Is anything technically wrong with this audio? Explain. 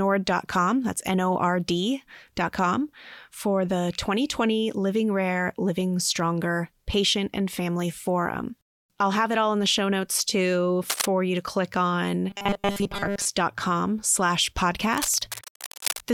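Yes. Between 10.88 and 11.08 s, after "the show notes too" and before "you to click on", and again from 14.88 to 16.04 s, there is cable scratch noise. A worn cable or connector being moved is the likely cause, and its fluctuating contact throws rough bursts of scratching over the speech at about 5 dB and 10 dB below it.

From 12.30 to 13.25 s, after "you to click on", the audio turns robotic from repeated short buffers. Audio likely arrived too late, so roughly 5 ms chunks were looped in place of most of the real signal, imposing a metallic 200 Hz buzz.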